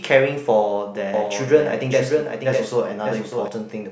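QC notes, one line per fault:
1.14–3.48 s, doubled audio track: a second full-band copy trails by about 0.7 s, a few dB quieter, with no decay, switching on and off abruptly, likely from a slower duplicate capture path.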